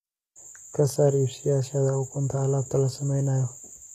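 From start to finish the speech carries plainly audible HE-AAC compression damage, likely from a low-bitrate stream in the region of 20 kbps. The codec spends its bits on the lower spectrum and fakes the treble by copying lower bands upward, so the top end sounds synthetic, with harmonics that don't line up above the crossover. Sibilants come out gritty and lispy, and there's nothing at all above 14.9 kHz.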